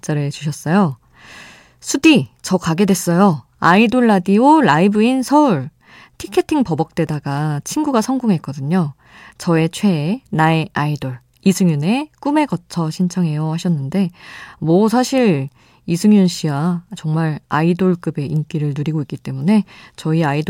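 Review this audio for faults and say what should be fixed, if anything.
Nothing here needs fixing, since the recording holds steady with no technical faults to flag anywhere along the way.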